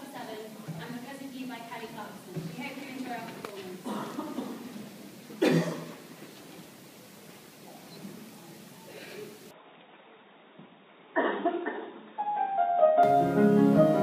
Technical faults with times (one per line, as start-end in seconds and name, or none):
9.51-13.03 input switched to a poorer device